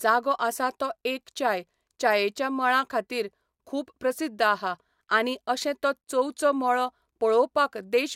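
Nothing stood out on listening to the recording.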